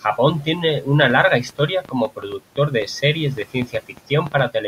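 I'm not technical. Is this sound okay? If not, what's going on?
No. From 1.05 to 4.40 s, just after "tiene una", there's a train of clicks: about twenty similar ticks, roughly six per second at an uneven pace, some louder than the speech. This is likely interference from nearby equipment.

There's also speech cut by the noise suppressor around 1.82 to 2.40 s and 3.54 to 4.11 s. Brief bits of speech turn faint, along with the faint room noise, rather than dropping out completely.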